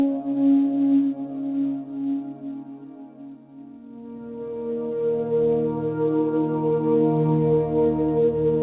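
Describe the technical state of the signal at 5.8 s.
At 5.8 s the music comes through intact, with no dropout, glitch or distortion, only the narrow band of the call path with nothing above 4 kHz.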